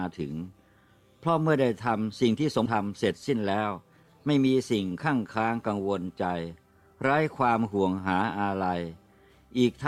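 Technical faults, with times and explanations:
2.65–2.67 s, skip ahead: around 400 ms of audio is dropped and playback jumps straight to later material, splicing the two sides together with no gap.
2.75–4.34 s, jitter buffer speed-up: the overfull buffer trims short pitch-period slices repeatedly, removing roughly 200 ms, so audio runs at about 112% speed at unchanged pitch.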